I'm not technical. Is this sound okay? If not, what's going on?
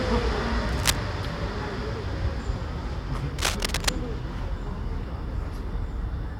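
No, there are two bursts of cable scratch noise: from 0.69 to 0.96 s and from 3.38 to 3.89 s. Each is a rough scratching or rustling, about as loud as the sound itself, laid over it for a moment. The likely cause is a worn cable or plug being moved. Unlike a single sharp click or a clean gap, it is a dense, uneven clump of crackle lasting a fraction of a second, then gone.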